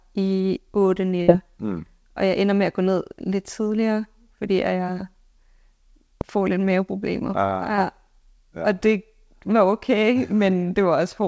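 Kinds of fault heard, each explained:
Burst of packet loss: a short run of audio packets failed to arrive in time, and the receiver covered the hole by extending the last received sound while fading it down. At about 1.22 s the last sound of the speech is held and fades for roughly 56 ms, then jumps ahead, with about 60 ms of the original speech missing.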